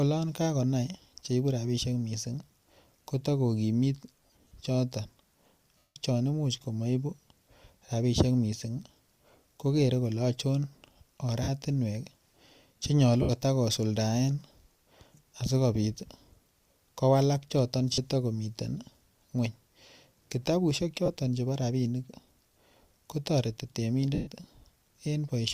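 Lost LE Audio frames break up the speech seven times. At 4.23 to 4.51 s, about 180 ms of audio drops out in short runs of up to about 30 ms, spread over 280 ms. Single gaps follow at 5.78 to 5.96 s, 11.43 to 11.49 s, 13.22 to 13.30 s, 17.93 to 17.98 s, 21.06 to 21.09 s, and 24.14 to 24.28 s, just after "ko toreti". Each gap's length is a multiple of 10 ms, which fits LC3's 10 ms frames. The decoder fills each hole by repeating the last spectrum with random phase, so voiced sound turns into a brief hissy smear. On a spectrogram, harmonics blur into flat noise bands. In the waveform, the level sags toward silence in the longer gaps.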